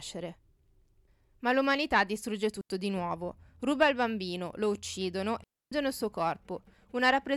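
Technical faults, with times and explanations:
2.61 to 2.70 s and 5.44 to 5.72 s, digital wireless dropout: the speech falls into near silence, first for about 84 ms after "l'umanità distrugge" and before "di nuovo", then for about 281 ms after "il bambino lo uccidono" and before "il suo". The receiver lost too much of the incoming data stream and muted itself with a very fast fade. There is no crackle or noise burst at either edge, so each gap sounds like a clean hole cut out of the speech.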